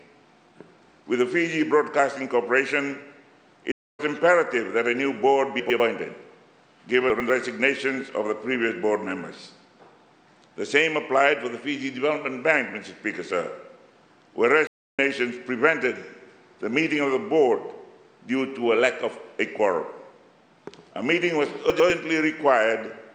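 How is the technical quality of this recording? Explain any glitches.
The recording has two kinds of glitch: two stream reconnects and three moments where chunks play out of order.

The stream reconnects occur at 3.72 to 4.00 s and 14.67 to 14.99 s. The connection dropped, the player fell silent for 272 ms and then 306 ms, reconnected, and started a new decoder partway through the stream. Playback picks up about a fifth of a second further on, so some material is skipped. A plain dropout leaves a gap and continues where it stopped; here the silence is followed by a jump forward.

The chunks out of order fall at 5.6 to 5.8 s, 7.1 to 7.3 s and 21.7 to 21.9 s. Each time a 100 ms piece of audio arrived one chunk late and plays after the piece that should follow it. Nothing goes missing, but the two chunks are swapped, leaving three hard joins and a brief jumbled stretch. Unlike the reconnects, there is no silence and no skip.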